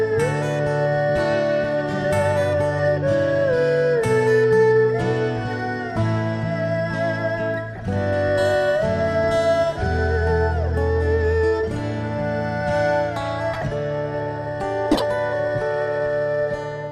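Corrupt frames were decoded at 7.74–7.80 s, 13.53–13.64 s and 14.91–15.02 s. Damaged compressed data was played anyway, throwing energy into wrong frequencies. Each event is a brief chirp or noise burst, and the last is the loudest, peaking at about -5 dBFS. On a spectrogram they appear as short vertical smears.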